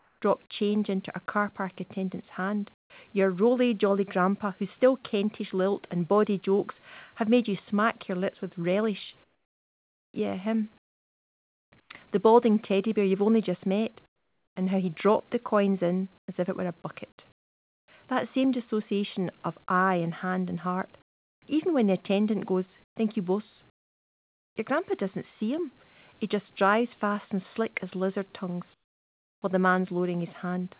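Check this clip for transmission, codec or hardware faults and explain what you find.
The pauses show comfort noise in place of the background, heard eight times. The call audio stops at 4 kHz, which fits a G.711 narrowband codec.

Comfort noise in place of the background: 0 to 0.22 s before "change into a car", 2.74 to 2.9 s, 9.24 to 11.9 s after "your lips with relish", 14.06 to 14.56 s between "you've only just met" and "and how he dropped", 16.18 to 17.88 s, 21.02 to 21.42 s, 22.84 to 24.56 s, and 28.74 to 29.42 s. The likely cause is discontinuous transmission. The sender goes silent, and the receiver fills the gap with synthetic hiss. The real background turns into flat, featureless noise. Several gaps sit about 20 to 27 dB lower, and the first is about 6 dB lower.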